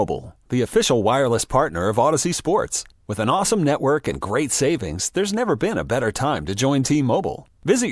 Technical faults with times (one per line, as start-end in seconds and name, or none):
none